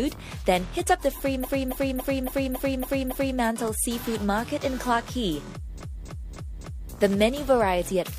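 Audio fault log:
1.40–3.35 s: repeated frames. A 278.6 ms block, which fits about six compressed frames, plays seven extra times, stuttering and adding 1.95 s.
5.76–6.88 s: repeated frames. The same 278.6 ms block length repeats four extra times, so the audio stutters, adding 1.11 s.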